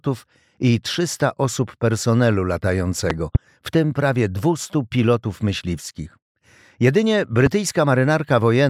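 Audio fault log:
3.10–3.38 s, loud pop: two sharp thumps in quick succession, peaking roughly 15 dB above the surrounding sound. This is likely a voltage step from a plug, switch or static, shaped by the downstream circuits into a rounded pulse. Unlike a dropout or digital click, nothing goes missing: the sound continues underneath.
7.46 s, loud pop: a single, shorter thump about 10 dB above the signal, again laid over the continuing sound rather than interrupting it.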